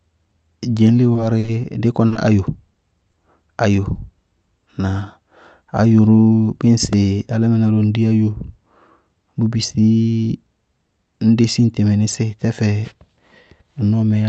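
From 1.13 to 3.15 s the speech turns choppy, with tiny pieces dropping out. This is repeated packet loss: packets went missing or arrived late again and again, seven times in this stretch. Each hole was papered over by extending the previous sound, about 180 ms of fill in all, while about 80 ms of real audio is gone. No single gap exceeds 40 ms, but they come close together.

At 3.93 to 3.97 s one sound is held a touch too long. This is a short stall from a late packet. The jitter buffer ran dry when a packet was due, so the receiver stretched the last sound for about 20 ms until the packet turned up, then carried on from the same point. Nothing is lost, but the playout delay grew by that 20 ms.

Between 5.65 and 6.15 s the talking sounds hurried without any change in pitch. This is a jitter buffer speed-up. The buffer was holding more audio than its target, so the receiver trimmed short pitch-period-sized slices many times in a row, removing roughly 50 ms in total. 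Playback runs at about 109% speed until the excess delay is drained.

At 6.93 s, just before "álámɩná ró ŋ dí", there is a brief click-like buzz. This is a repeated buffer. Fresh audio did not reach the output in time, so the device played the same tiny block again, three times in all, with a hard join at each repeat. The length of the block fits a 64-sample buffer of roughly 1.5 ms. A few milliseconds of audio are lost. Throughout the clip, the call path's Opus coding band-limits the sound to 8 kHz.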